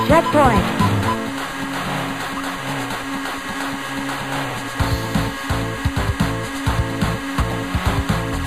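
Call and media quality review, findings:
Overlapping chunks at 1.51 s and 7.52 s. Brief click, stutter. About 6.5 ms of sound plays twice at each join. Probable component: chunked processing or transport stage, 3.0 s chunks. Mechanism: each new chunk starts before the previous one ends, so the tail is repeated. Both events identical in size. Suspect framing offset in the chunk reassembly or buffer handoff.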